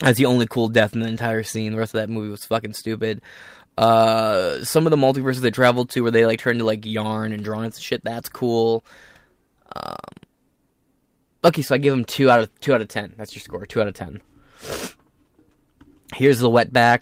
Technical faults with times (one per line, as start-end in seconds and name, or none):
none